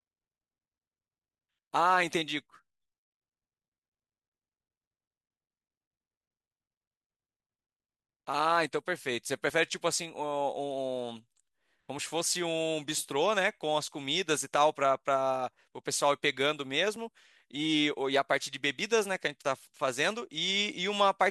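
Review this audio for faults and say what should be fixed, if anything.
There are five tiny skips in this speech, at 9.50, 11.99, 14.47, 16.96 and 19.45 s, each dropping about 10 ms with the two sides butted straight together. They're evenly spaced about every 2.5 s, so this is likely audio missing between chunks: the recorder loses a sliver each time it closes one block and starts the next. To prevent it, buffer across chunk boundaries so capture never pauses during the handover.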